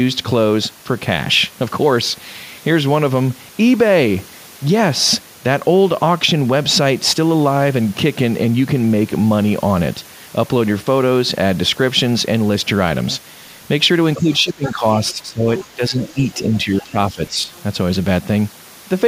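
From 14.16 to 17.51 s the speech is suppressed in double talk. For roughly two seconds in total it dips, by as much as about 10 dB at the deepest point. This is likely an echo canceller attenuating the near talker while the far end was also active.

During and just after that span the other side's voice leaks through four times. It comes through at 14.33 to 14.71 s and 15.57 to 15.65 s at about 10 dB below the speech, then more faintly at 16.08 to 16.24 s and 17.27 to 17.63 s. These are short residual-echo fragments that the canceller likely failed to remove.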